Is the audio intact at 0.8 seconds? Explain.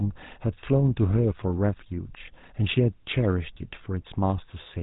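No. At 0.8 s the speech carries GSM full-rate codec damage, present throughout the clip. The codec rebuilds the voice from a vocal-tract model excited by sparse pulses, which fits a 13 kbps stream. Nothing survives above 3.8 kHz. The voice sounds buzzy and gravelly.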